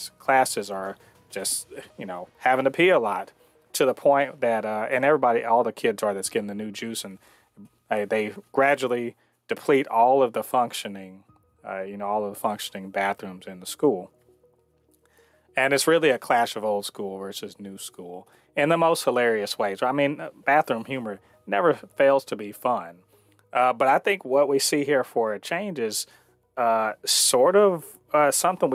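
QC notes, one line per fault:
Throughout, gain pumping: the level is pulled down under each loud sound, with a level swing of around 5 dB, so loud and quiet passages sit unnaturally close together and the whole clip sounds squashed. The likely cause is input gain set far too high, with a fast limiter or compressor clamping down on each peak. On a waveform the peaks look flattened and the noise floor bulges between them; a spectrogram shows the noise band brightening in pauses.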